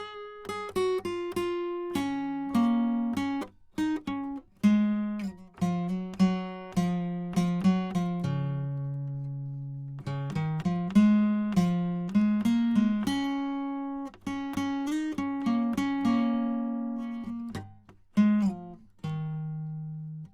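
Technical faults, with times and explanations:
No technical faults are audible anywhere in this music.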